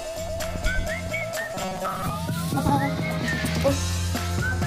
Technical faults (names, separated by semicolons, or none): robotic sound from repeated short buffers